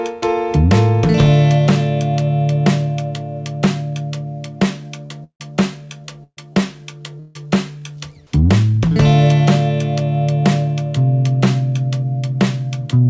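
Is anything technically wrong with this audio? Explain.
Yes, there's a cluster of packet-loss trouble between about 5 and 7.4 seconds, all on a call path whose band stops at 8 kHz, which fits a 64 kbps G.722 link.

Short concealed packet loss hits at 5.06, 5.56, 6.06 and 6.53 s. Each time 20 to 40 ms never reached the decoder, so it stretched the last bit of sound over the hole and blended back. You hear a quick smear or wobble.

Twice the audio turns into a fading buzz or hiss that ends with a jump ahead. From 5.24 to 5.42 s it's about 0.16 s of fill, then roughly 80 ms of silence. From 7.20 to 7.37 s it's a similar stretch that goes straight back into the audio. The likely cause is a long network dropout, with 160 ms of the audio never played.

A burst of packet loss runs from 6.24 to 6.39 s. Around 140 ms went missing in one go. The receiver held the last sound as a decaying buzz or hiss, then went quiet for about 60 ms before resuming a bit further on, with the middle gone.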